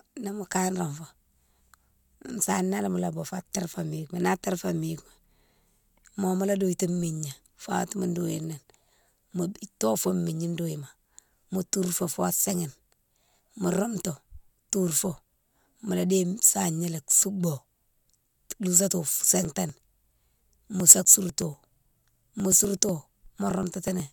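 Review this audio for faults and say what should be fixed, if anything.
From 19.45 s to 24.0 s the speech is marred by periodic USB or driver dropouts: a regular tick every 0.123 s, around forty in all. At each one, a couple of milliseconds of audio are skipped outright. On the waveform this shows as abrupt splices. The spectrogram shows thin, evenly spaced vertical broadband lines through the speech. Something is stalling the bus or driver on a fixed cycle. To prevent it, disable the background task or USB power saving that causes the stalls, and enlarge the audio buffer.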